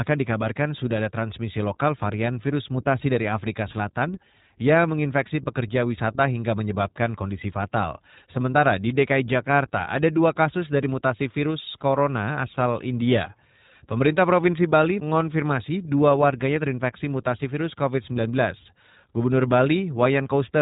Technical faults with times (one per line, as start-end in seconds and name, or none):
0.00-20.61 iLBC codec